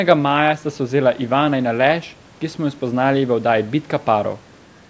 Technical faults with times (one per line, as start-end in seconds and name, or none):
none